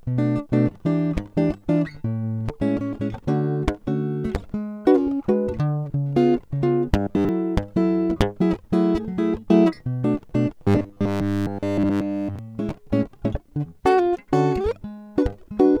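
From 6.99 to 7.29 s the music turns to a rigid, metallic buzz at 100 Hz, the robotic sound from repeated short buffers: most of the span is a single 10 ms slice replayed while fresh audio is skipped, likely from input arriving too seldom. From 10.64 to 12.39 s the repetition is total. The waveform shows identical 10 ms cycles, and the spectrogram shows flat harmonic lines at multiples of 100 Hz.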